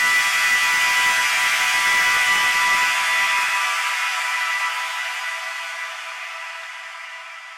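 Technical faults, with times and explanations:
Throughout: hard clipping. The level is pushed about 8 dB past what the chain can pass, so a small share of the peaks, around one sample in twenty, get sliced flat. Those squared-off tops throw harmonics way up the spectrum, which is why every loud moment has that gritty, crackly edge.
4.40–4.61 s and 6.63–6.82 s: DAB burbling. Reception drops out just enough for a trickle of bit errors to slip past the error correction into the MP2 data, and wrong samples put short blips of noise into single sub-bands. Each burst runs about a fifth of a second, which fits roughly nine or ten frames.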